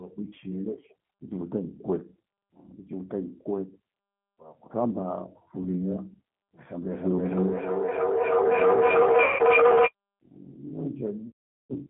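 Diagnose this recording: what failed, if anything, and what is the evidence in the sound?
The whole 12-second speech clip has been through a G.729 codec, a codec-stage problem you can hear right away. The line runs roughly 150 Hz to 3.5 kHz with nothing on top. At 8 kbit/s the voice is rebuilt from a vocal tract filter, a pitch predictor and a handful of pulses per frame, so the damage is plainly audible: a rough, slightly synthetic edge on everything.

On top of that there's VoIP packet loss concealed by the speech codec, which is a network failure covered up at the decoder. The first dropout at 5.63 to 5.68 s is a brief smear of about 20 ms. At 9.24 to 9.43 s, about 150 ms, the decoder fills the gap from what it last had. The worst is 11.28 to 11.74 s, roughly 420 ms, where the decoder keeps extrapolating its last pitch and filter and fades toward silence. The lengths fit 10 ms frames going missing.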